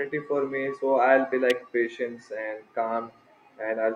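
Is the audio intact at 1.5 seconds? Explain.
No. At 1.50 s an electrical switching spike cuts in, a sharp snap peaking around -15 dBFS over the speech, likely from a nearby switch arcing into the audio line. On a waveform it is a narrow spike, and on a spectrogram a thin vertical broadband line.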